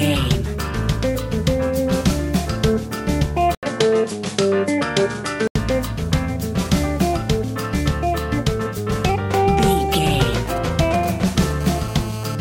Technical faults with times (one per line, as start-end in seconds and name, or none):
3.55-5.55 input switched to a poorer device
10.33-11.52 GSM signalling bursts
11.61-12.35 GSM phone buzz